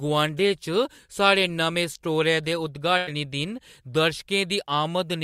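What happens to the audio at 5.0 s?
Nothing goes wrong at 5.0 s; the speech there plays through intact, with no dropout, click or distortion.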